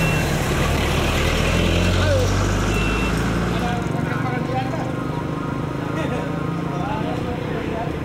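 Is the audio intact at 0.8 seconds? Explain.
No. Loose connector crackle runs from 0.76 to 0.80 s: a worn or dirty contact makes and breaks rapidly, chopping the sound into an irregular burst of scratchy crackle. The waveform shows it broken into fragments with abrupt jumps; the spectrogram shows scattered broadband vertical streaks.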